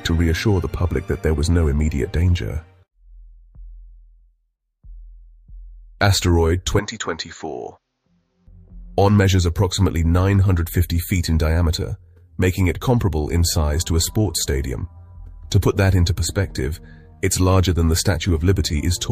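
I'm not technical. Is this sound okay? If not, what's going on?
No, not quite. From about 6.79 to 8.47 seconds the sound turns duller and noticeably quieter, with a faint new hiss and no gap at either change. That's an input switched to a poorer device, likely a lower-quality microphone passing nothing above 7.2 kHz.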